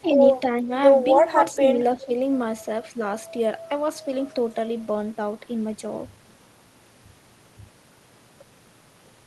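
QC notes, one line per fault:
0.01–0.18 s, 0.55–0.70 s, 1.23–1.63 s and 1.96–2.09 s, speech suppressed in double talk: the voice briefly sinks, dropping by roughly 5 to 10 dB in most spots and around 15 dB in the longest dip, near 1.2–1.6 s, before recovering. This is likely the echo canceller ducking the near talker while the far side was also active, mistaking the overlap for loudspeaker echo, heard through the Opus call path's band-limited coding.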